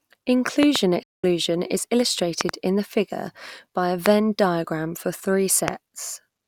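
At 0.63 to 0.78 s a loud pop lands on the speech as a pair of sharp clicks, peaking around 20 dB above the signal, with the speech continuing underneath. This is likely a voltage pulse from a switch, connector or static that the downstream circuitry shaped into a thump.

From 1.03 to 1.24 s comes a Bluetooth dropout. The output falls silent for about 203 ms, and the speech resumes further along, as though it had kept playing through the gap. That duration fits roughly ten packets that likely never reached the headphones in time.

The same double pop returns at 2.41 to 2.51 s, just before "in the figure by". A single pop follows at 4.06 to 4.08 s, right after "the figure by a", and another at 5.68 to 5.70 s. Each is again roughly 20 dB above the speech.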